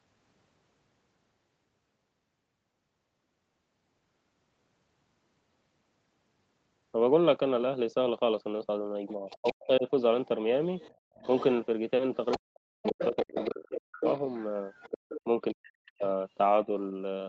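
At 9.07 to 9.53 s a second, fainter voice sits underneath, about 15 dB down. That's other side's voice leaking through, likely loudspeaker echo the canceller didn't fully remove. From 9.16 to 9.86 s the talker drops in chunks by a good 40 dB, which is speech suppressed in double talk: the canceller likely couldn't separate the two voices and pulled both down. The leak comes back quieter, about 25 dB down, from 10.27 to 11.66 s. Inside that stretch, at 10.97 to 11.14 s, the room tone briefly dips by about 37 dB and then recovers. That's the background gated by the echo canceller while the loudspeaker was active. The worst leak runs from 12.31 to 16.07 s, only about 10 dB under the talker. During it the talker gets chopped hard again, by about 40 dB, at 12.37 to 14.05 s and 15.25 to 16.04 s, and a much gentler dip of a few dB follows at 16.65 to 16.74 s.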